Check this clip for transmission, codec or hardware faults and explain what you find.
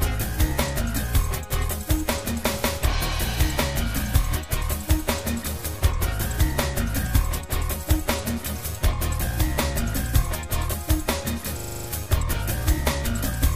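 One fault is present, a system hang loop from 11.6 to 11.88 s. The playback system froze while the audio hardware kept reading the same 40 ms section of its ring buffer, replaying it seven times at a 25 Hz loop rate. The result is a short, rapid stutter, a rough rattling repetition rather than a smooth tone, before normal playback resumes. Little or no audio appears to be missing around the hang.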